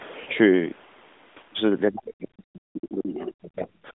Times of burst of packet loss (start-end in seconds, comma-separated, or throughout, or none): none